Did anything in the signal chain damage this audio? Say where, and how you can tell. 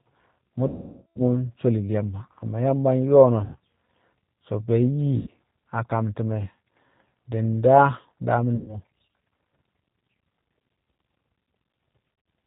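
Yes. The damage comes from two stages of the call path.

At the codec stage, the whole clip has been through G.729 at 8 kbit/s. The speech has the rough, slightly synthetic edge of a coder that rebuilds each 10 ms frame from a vocal-tract filter, a pitch predictor and a few pulses. Nothing above 4 kHz survives. A spectrogram would show a hard ceiling at 4 kHz across the entire clip, with harmonics below it looking grainy rather than clean.

At the network stage, VoIP packet loss concealed by the speech codec appears five times. The longest gap runs from 0.68 to 1.18 s, about 480 ms of missing audio. The others fall at 3.44–3.57 s, 5.17–5.29 s (just before "a kam"), 8.56–8.77 s and 12.14–12.26 s. The last is scattered over 120 ms, with its longest run 60 ms. During each gap the decoder repeats its last pitch and filter at falling gain, so the sound turns into a buzzy tone or coloured noise that fades. 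On a spectrogram this shows as a frozen spectrum dimming out. On the waveform it shows as a decaying envelope followed by a weak or distorted onset when real audio returns.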